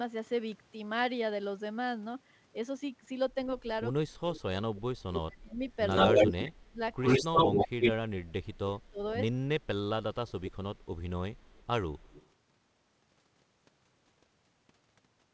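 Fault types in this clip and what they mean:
Speech suppressed in double talk: Between 4.06 and 9.46 s the speech repeatedly dips and cuts out in pieces, at its deepest by around 35 dB, with roughly three seconds lost or thinned in total. This is likely an echo canceller that could not separate the near talker from loudspeaker echo while both sides spoke at once, so it turned everything down rather than passing the speech.
Echo leak: A delayed copy of the speech returns three times. It is a brief scrap at 4.34 to 4.41 s, 149 ms behind and about 15 dB below the speech. From 5.7 to 7.92 s it is a sustained stretch 83 ms behind and about 10 dB louder than the direct speech. From 9.6 to 12.3 s it is faint, 79 ms behind and about 25 dB down. The copy is likely residue a speakerphone's echo canceller failed to remove and sent back.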